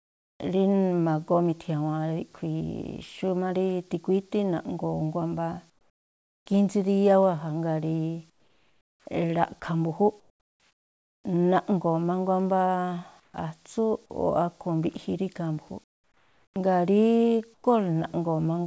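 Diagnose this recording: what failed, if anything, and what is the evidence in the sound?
Comfort noise in place of the background (call processing, likely discontinuous transmission). Pauses at 0–0.4, 5.70–6.46, 8.30–11.24, 13.20–13.34 and 15.84–17.64 s become steady, featureless noise, in three of them about 7 to 26 dB quieter than the real background. On a spectrogram they show as smooth, uniform bands that stop below 8 kHz like the rest of the G.722 audio.

Onset clipped by the voice detector, at 0.37–0.40 and 13.32–13.34 s. Sound likely returned before the detector reacted, so the first 30 and 20 ms went missing. The waveform jumps abruptly from the noise floor, with no soft attack.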